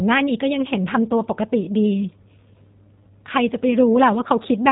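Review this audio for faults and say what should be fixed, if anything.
Throughout the speech the sound is narrow and slightly rough, with a buzzy, synthetic edge, and nothing comes through above about 3.8 kHz. This is plainly audible G.729 codec damage, and the character points to an 8 kbit/s G.729A stream. The codec does not keep the waveform. It rebuilds each 10 ms frame from a vocal-tract filter, a pitch predictor and a few fixed pulses, so fine detail and the upper band are lost. To prevent it, negotiate a wideband codec such as G.722 or Opus on the call path, and record before the VoIP leg.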